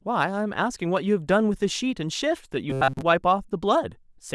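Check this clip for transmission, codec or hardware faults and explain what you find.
One fault is audible. From 2.70 to 3.02 s there is robotic sound from repeated short buffers: the speech turns into a rigid, metallic buzz fixed at 133 Hz. It is likely caused by audio arriving too seldom, with most of the gap filled by looping a roughly 7.5 ms segment. A spectrogram shows flat, evenly spaced harmonics at multiples of 133 Hz, and the waveform shows one identical short cycle repeating.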